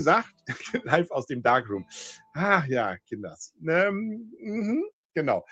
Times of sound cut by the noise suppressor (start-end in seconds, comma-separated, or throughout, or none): 0.30-0.48, 2.17-2.36